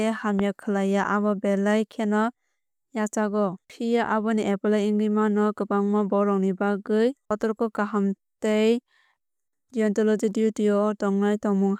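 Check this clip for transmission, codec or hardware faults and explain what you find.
One fault stands out: a single loud pop near the start of the speech.

Loud pop, 0.39 to 0.41 s: a sudden voltage step or pulse, most likely from a plug, switch, static discharge or driver glitch, entered the signal path. The downstream circuitry shaped that pulse into a brief burst lasting about 20 ms, peaking roughly 10 dB above the speech. It is heard as one sharp pop or thump laid over the speech, which carries on beneath it.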